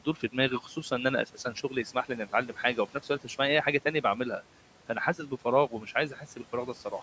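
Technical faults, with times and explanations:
0.05–0.35 s, 0.63–0.77 s, 1.27–1.71 s, 2.94–3.30 s and 6.13–6.39 s: speech cut by the noise suppressor. In each window the suppressor misreads quiet parts of the speech as background and pulls them down with the room noise, which sits about 21 dB under the speech. Roughly a tenth of a second is affected each time, with dips of about 10, 8, 12, 8 and 7 dB, so soft sounds come across swallowed or faint.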